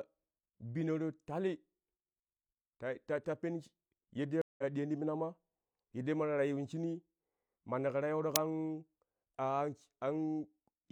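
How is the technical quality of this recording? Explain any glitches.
The speech is marred by two distinct glitches. At 4.42 to 4.64 s there is a stream reconnect. The connection dropped and a fresh decoder restarted. After about 0.17 s of silence, speech resumes roughly 150 ms further on, at "diyon ti mina ma". At 8.36 s an uninitialised buffer plays. Leftover memory was output as samples, producing a 2.9 ms loud crack, which fits a 128-sample block.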